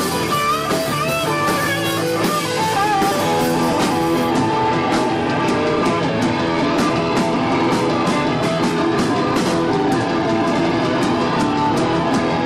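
From start to finish the audio suffers hard clipping. The signal is driven roughly 11 dB past what a stage in the chain can pass, so around a tenth of the samples hit the ceiling and are sliced flat. Those squared-off peaks add harmonics high up the spectrum, heard as a harsh fuzz on every loud moment. Soft saturation would round the peaks and thicken the sound gently, but this distortion is abrupt and gritty.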